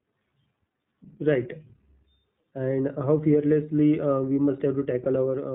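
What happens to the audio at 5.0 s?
Lost iLBC frames at 5.04 to 5.08 s: about 20 ms of the signal never arrived, which fits a single lost 20 ms frame. The decoder fills the hole by repeating the last pitch cycle blended with noise, so instead of silence there is a brief held, faintly buzzy or breathy vowel-like sound. Because each iLBC frame is decoded independently, the speech returns cleanly at 5.08 s with no lingering smear.

This happens over speech already carried by the iLBC codec, here at 15.2 kbps in 20 ms frames. That narrowband coding removes everything above 4 kHz, so the audio sounds muffled and slightly rough or synthetic. The damage is plainly audible and continues straight through the concealed gap.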